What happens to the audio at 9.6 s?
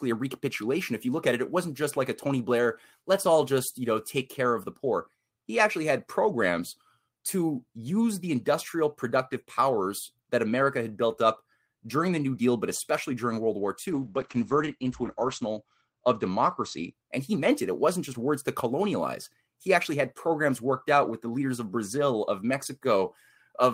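Nothing goes wrong at 9.6 s: the speech runs on intact through that moment, with no break, click or change in level or tone.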